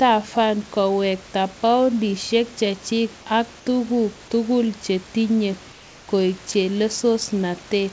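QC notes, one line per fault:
5.72–6.08 s: comfort noise in place of the background. For 360 ms the room's detailed background gives way to steady, featureless noise about 2 dB quieter. The sound itself continues, which sets it apart from a dropout, and likely comes from discontinuous transmission.
6.52 s: sound dropped by the voice detector. About 20 ms of the speech itself is lost and replaced by flat noise. Here actual sound goes missing, not just background, likely because the detector misread it as silence.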